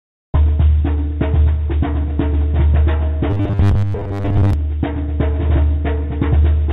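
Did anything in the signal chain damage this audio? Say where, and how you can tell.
Yes. From 0.0 to 0.34 s the background is replaced by comfort noise: a steady, featureless hiss about 12 dB quieter than the real background. This is call processing. The sender likely stopped transmitting during silence, and the receiver synthesised noise to fill the gap.

The onset is clipped by the voice detector at 0.32 s. About 20 ms of the start is missing, so the sound begins abruptly with no soft attack. The detector was likely slow to register the onset, and comfort noise covered the lost start.

Robotic sound from repeated short buffers runs from 3.30 to 4.53 s. A rigid metallic buzz at 100 Hz rides on the audio, which fits a 10 ms segment being looped. This points to the jitter buffer: most of the real audio in that stretch was likely skipped and replaced by repeats.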